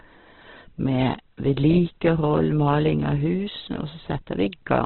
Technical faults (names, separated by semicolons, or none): Opus compression